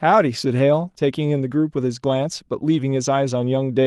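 No technical faults in this speech recording; it has passed through a call codec that rolls off the top end at about 12 kHz, as expected for that path.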